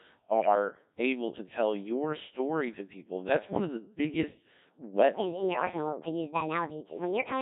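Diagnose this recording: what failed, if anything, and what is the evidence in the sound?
Codec stage: the speech is buzzy and robotic throughout, rebuilt from sine waves by a Codec 2 vocoder. The heavy damage fits its 1.3 kbit/s mode. Unlike ordinary lossy smearing, no original waveform survives.

Radio link: from 0.41 to 0.55 s, just before "able to tell your", bit errors on digital voice radio make the synthetic voice lurch in pitch, level and tone into warbling gibberish. Around one bit in ten is corrupted, so a few frames decode wrong parameters instead of dropping to silence.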